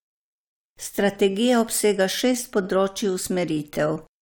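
No faults can be heard anywhere in this speech recording.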